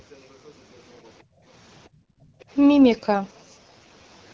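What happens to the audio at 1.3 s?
Right around there, from 1.23 to 1.45 s, the room sound gets pulled down, which is the background gated by the echo canceller. While the far-end loudspeaker was playing, the canceller clamped the microphone hard to keep that playback from echoing back, and it took the background with it, by about 24 dB at the deepest point. So you hear the ambience duck out for about a fifth of a second, then come straight back once the canceller releases.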